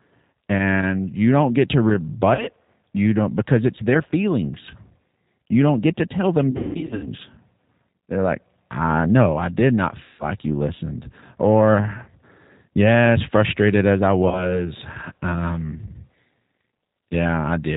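Speech, carried throughout over the G.729 codec (the G.729A variant at 8 kbit/s), with plainly audible damage. Everything above 4 kHz is gone, and the analysis-by-synthesis rebuild from a vocal tract filter, pitch predictor and sparse pulses gives the voice a rough, synthetic edge. VoIP packet loss concealed by the speech codec occurs at 2.35–2.47 s (40 ms lost), 6.51–7.09 s (400 ms lost, scattered over 520 ms, longest run 180 ms), 10.03–10.25 s (160 ms lost) and 14.28–14.62 s (40 ms lost). In each gap the decoder extends its last pitch and filter into a fading buzzy tone or coloured noise. Because each frame builds on the last, the voice stays weak and distorted briefly after packets resume. The gap lengths fit 20 ms packets.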